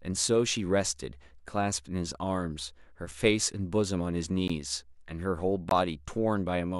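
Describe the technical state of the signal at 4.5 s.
At 4.48 s the speech drops into a block of digital silence lasting about 15 ms. For that brief span the signal is silent, most plausibly because the output buffer was not filled in time. The signal stops and restarts abruptly with no fade, so the gap is heard as a tick or small pop. A waveform shows a flat, near-silent line. A spectrogram shows a thin blank vertical gap.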